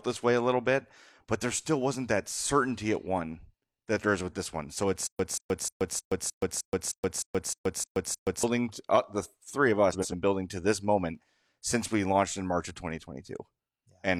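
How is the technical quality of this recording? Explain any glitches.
The recording has two playback faults.

From 5.07 to 8.43 s there is a stutter with silent gaps. The same 183 ms fragment of speech repeats 11 times, each followed by about 125 ms of digital silence, a steady cycle of roughly 308 ms. A stalled stream replaying its last buffer is the likely cause. The waveform shows identical blocks separated by flat silent stretches.

From 9.93 to 10.14 s, between "uh the three of" and "building to this moment", there are frames out of order. Two adjacent blocks of about 93 ms each play swapped, giving a brief garbled flutter. A spectrogram shows abrupt vertical discontinuities where the blocks meet.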